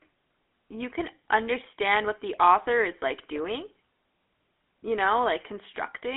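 Throughout the speech, the GSM full-rate codec rebuilds the voice from a vocal-tract model fed by regular pulses, leaving a plainly buzzy, gravelly roughness that fits a 13 kbit/s coder. Plain telephone band-limiting to 250 Hz–3.5 kHz would narrow the sound without this grit.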